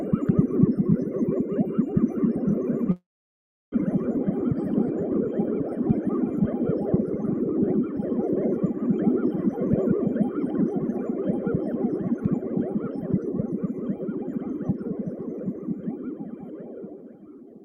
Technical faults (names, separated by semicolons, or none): long network dropout; jitter buffer speed-up